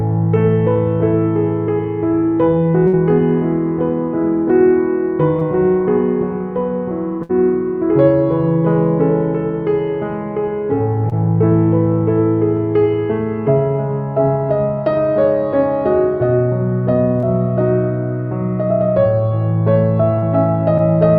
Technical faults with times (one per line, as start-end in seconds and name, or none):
2.87-2.95 burst of packet loss
5.39-5.43 short concealed packet loss
7.23-7.31 burst of packet loss
11.09-11.13 short concealed packet loss
17.19-17.25 short concealed packet loss
20.19-20.24 short concealed packet loss